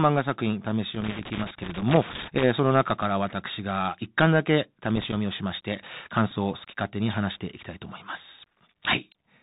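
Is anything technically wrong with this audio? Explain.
Yes, there are three separate problems here.

The whole speech clip has the Bluetooth CVSD headset codec sound, which fits a 64 kbps CVSD link. One bit per sample just nudges the level up or down, and nothing above 4 kHz survives. The s sounds come out scratchy over a grainy hiss, and the damage is plainly audible.

There's loose connector crackle from 0.95 to 2.44 s and again from 4.90 to 5.18 s. A flaky contact keeps making and breaking, chopping the signal, so you get irregular bursts of scratchy crackle during those stretches.

At 6.31 s there's a Bluetooth headset packet repeated glitch. About 7.5 ms of audio went missing, which fits two lost packets, and the chip replayed the previous packet's bits instead. You hear a brief buzz near 267 Hz until good packets return.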